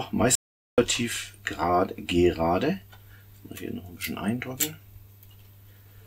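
At 0.35 s the sound cuts out abruptly and returns at 0.78 s, an audio dropout to silence lasting about 0.43 s. The likely cause is a lost input link while recording continued. The waveform shows a flat line, and the spectrogram a fully blank band with no room tone.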